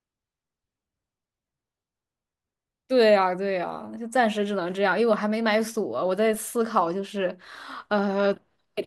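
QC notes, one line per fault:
6.34 s, DC step. The zero line of the waveform jumps suddenly by about -39 dBFS. That sudden shift is heard as a low thump under the speech. The offset then drains away as a 20 Hz high-pass filter pulls it back to zero.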